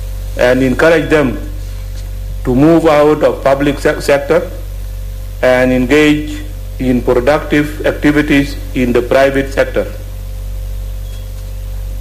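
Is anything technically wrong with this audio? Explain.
Yes, there is hard clipping in five stretches: 0.41–1.25 s, 2.49–4.38 s, 5.44–6.12 s, 6.90–8.40 s and 8.82–9.79 s. The signal is driven about 7 to 9 dB past what a stage can pass, so its peaks are cut flat, adding harsh fuzz to the loud passages. On the waveform these sections show squared-off tops. On a spectrogram, dense upper harmonics spread far above the normal content.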